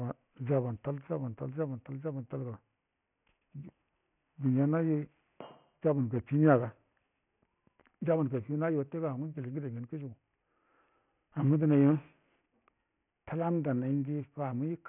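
From start to finish the speech carries aliasing. It was brought down to a much lower sample rate, which fits something like 6 kHz, without a proper low-pass filter first. So all the energy above about 3 kHz folds back under that line and lands at wrong, unrelated frequencies, sitting roughly 30 dB below the speech. You hear it as gritty, metallic sibilants, and the spectrum runs hard right up to the 3 kHz edge.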